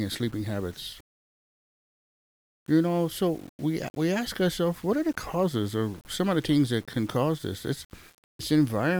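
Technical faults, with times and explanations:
Throughout, low bit depth without dither: the speech has a grainy, rasping distortion that tracks the voice, thickening on quiet passages and fading into sputter or silence at the softest moments. This is likely from rounding the signal to around 7 bits with no dither. The resulting error is correlated with the waveform instead of spread as steady hiss, and it sits only roughly 30 dB below the speech and changes character with every sound.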